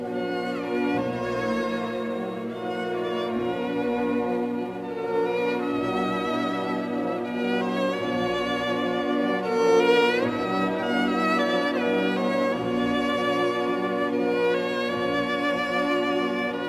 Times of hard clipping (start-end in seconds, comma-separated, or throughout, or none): none